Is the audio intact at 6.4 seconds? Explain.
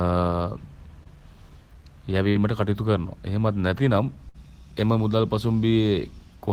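Yes, at 6.4 seconds the speech plays through intact, with no fault to be heard at that moment.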